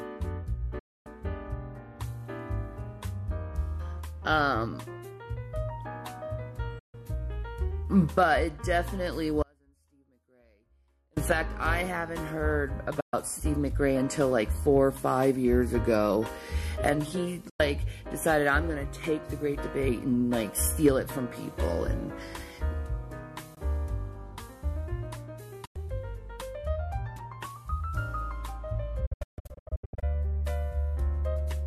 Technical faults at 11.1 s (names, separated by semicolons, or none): audio dropout to a faint residue